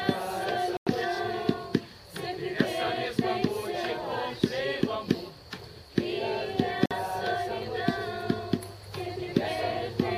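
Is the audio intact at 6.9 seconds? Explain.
No, there's a dropout right there, from about 6.86 to 6.93 s. The sound cuts to silence for about 50 ms and then picks back up, which sounds like a Bluetooth stall. The likely cause is radio interference holding up packets long enough for the headphones' buffer to run empty, so playback simply paused until the resent data arrived and filled it again.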